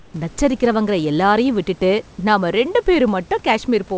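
From the start to about 0.14 s, the room background is replaced by a smooth, featureless hiss about 5 dB quieter than the real background that follows, which sits about 30 dB below the loudest speech. This is comfort noise in place of the background. The sender likely stopped transmitting during the pause, and the receiver filled those 139 ms with synthetic noise shaped only loosely like the room, so its detail is lost. Like the rest of the call, it carries nothing above 8 kHz.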